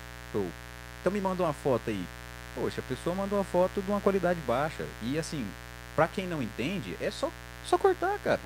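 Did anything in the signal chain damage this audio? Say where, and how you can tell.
Yes: in the analogue wiring, switching spikes on 60 Hz mains leaked in, causing mains buzz throughout, a steady raspy drone fairly loud under the speech.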